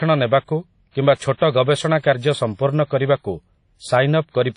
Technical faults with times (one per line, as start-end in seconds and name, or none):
0.00-4.57 WMA compression
0.91-1.41 pre-echo
2.00-2.04 pre-echo